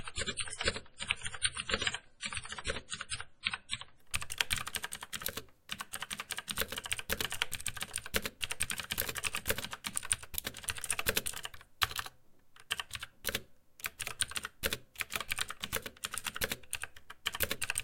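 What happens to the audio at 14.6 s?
At 14.6 s the sound plays through intact, with no dropout, click, distortion or other fault at that point.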